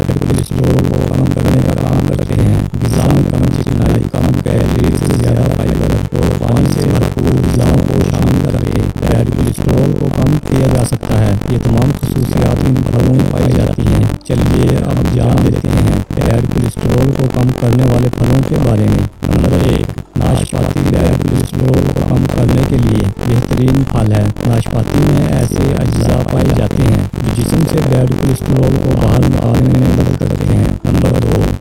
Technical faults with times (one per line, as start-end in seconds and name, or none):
0.00-31.60 buffer tearing